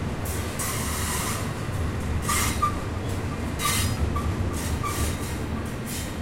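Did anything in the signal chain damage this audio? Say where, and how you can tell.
Yes, at the playback stage. At 3.97 s there is a CD skip: a brief tick from a mute lasting only a few milliseconds, after which the sound resumes at a different point rather than continuing from where it left off. That discontinuity is the signature of the disc transport losing track. A mechanical knock or a surface flaw made the laser pickup jump to another turn of the spiral, so the player briefly silenced its output and carried on from the wrong place.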